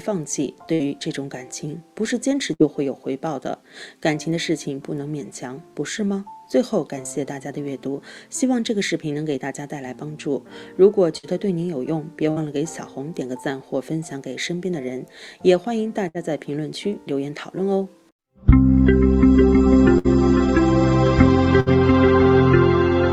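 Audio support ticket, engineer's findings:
Burst of packet loss at 0.73, 2.53, 11.17, 12.31, 16.08, 19.98 and 21.60 s. Receiver jitter buffer conceals about 60 ms with a decaying held buzz or hiss, then skips about 60 ms ahead. Unlike a dropout to silence, no dead gap.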